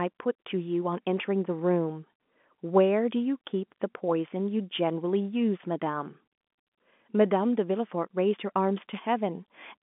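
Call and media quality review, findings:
Nothing stood out on listening to this speech clip beyond the expected narrowband telephone sound, with no content above roughly 3.7 kHz.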